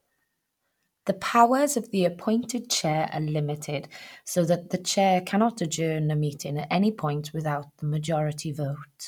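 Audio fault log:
Nothing faulty is heard anywhere in this speech recording.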